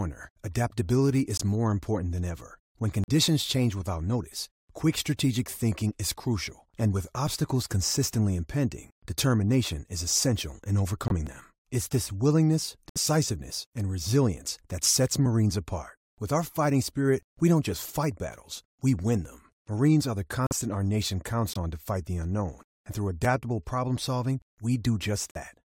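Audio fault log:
1.37–1.41 s, 3.04–3.09 s, 11.08–11.12 s, 12.89–12.97 s, 20.47–20.52 s, 21.53–21.57 s and 25.31–25.37 s: corrupt frame muted. Each is a sudden drop to silence of roughly 40 to 80 ms, which fits one to three damaged compressed frames being rejected by the decoder and replaced with silence. The sound stops abruptly and resumes at the right moment. Unlike a skip between chunks, nothing is lost from the timeline; the gap is audible emptiness.
11.27 s: audio missing between chunks. A tiny jump of only a few milliseconds, with the sound on either side butted together and no silence between them. It is likely caused by the recorder dropping samples as it hands over from one 4 s chunk to the next. Unlike the muted frames, no hole can be heard. The sound simply leaps slightly ahead.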